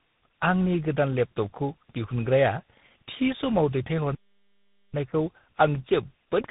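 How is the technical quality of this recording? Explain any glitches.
The recording has two problems: tandem speech coding throughout and one playback stall.

Tandem speech coding runs the whole clip. The speech sounds as if it passed through three speech coders in a row, likely a GSM-type coder, CVSD and G.726 ADPCM, each re-coding the last one's damage. It sounds rough, muffled and warbly. A spectrogram shows nothing above 3.8 kHz and smeared harmonics.

A playback stall runs from 4.15 s to 4.94 s, about 0.79 s. The audio cuts out mid-flow, likely because the player ran short of data or was blocked, and then resumes. The waveform shows a flat silent gap. The spectrogram shows a blank vertical band.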